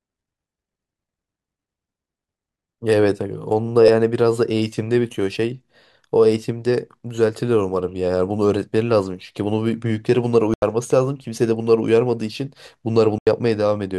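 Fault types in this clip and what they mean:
corrupt FLAC frame: Damaged bits reached the decoder unchecked, so its prediction ran on wrong values until an intact frame restored clean speech. At 3.82 s this is a harsh burst of about 60 ms peaking near about -5 dBFS, and at 7.89 s a brief click only about -38 dBFS. Unlike a muted frame, this fault adds noise on top of the speech rather than leaving a gap, and its loudness depends on how far the prediction drifted.
corrupt frame muted: Here the decoder rejected damaged frames and the player filled them with silence. The result is a sudden hole in the speech of about 88 ms from 10.54 to 10.62 s and about 86 ms from 13.18 to 13.27 s, each roughly the length of two frames. The speech resumes on time after each gap. What separates this from a corrupt FLAC frame is the clean dropout to silence instead of an added burst or click.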